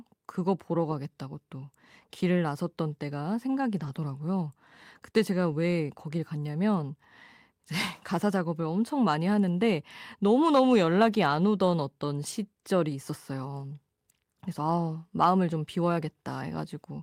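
Between 3.79 and 3.89 s, again at 5.51 to 5.53 s, and once more at 12.03 s, the speech briefly turns rougher and noisier without ever dropping out: lost packets rebuilt from error correction. The following packets carried low-bitrate copies, which the decoder played instead. The first stretch sounds like about 60 ms, roughly three 20 ms frames; the later two sound like single frames. Unlike plain concealment, nothing smears, buzzes or repeats; the audio keeps going, only coarser.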